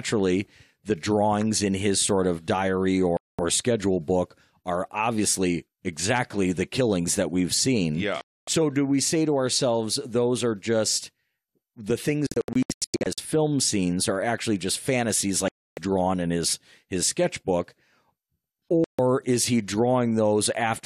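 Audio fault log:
3.17–18.99 s, digital broadcast dropout: the speech mutes abruptly at 3.17–3.39 s, 8.21–8.48 s (just before "do we say to"), 15.48–15.78 s and 18.84–18.99 s (just before "is he"). At 12.27–13.18 s it breaks into several short holes, the longest about 96 ms, totalling 0.55 s of silence before "film scenes are actually." The receiver muted whenever frames failed or went missing, and the lost speech never returns.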